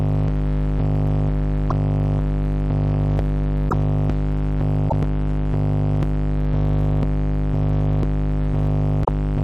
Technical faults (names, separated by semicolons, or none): broken MP3 bit reservoir